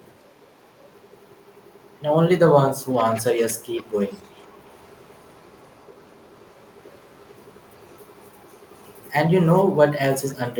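Echo leak appears in this speech clip at 2.98 to 3.54 s, 3.73 to 4.88 s, 5.11 to 6.7 s, 7.48 to 9.11 s and 9.4 to 9.64 s: a faint copy of the voice trails it by about 0.5 s. It starts at roughly 20 dB below the speech, then sinks to some 30 to 35 dB down. The likely cause is a far-end loudspeaker whose sound reached its microphone and slipped past an echo canceller that did not remove it all.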